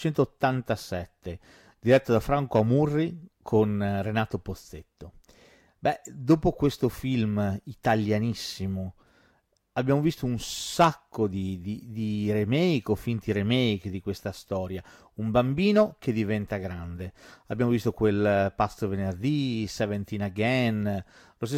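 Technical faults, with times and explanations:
No technical faults can be heard anywhere in this speech.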